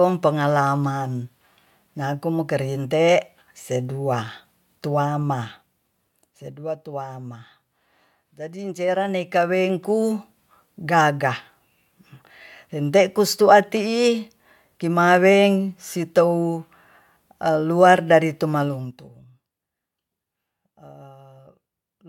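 A ticking, zipper-like roughness rides on the speech as the level falls from 5.12 to 6.6 s, rises from 8.78 to 10.18 s, and drops faster from 18.6 to 19.32 s. This zipper noise comes from unsmoothed gain moved in 2 dB steps, each step clicking.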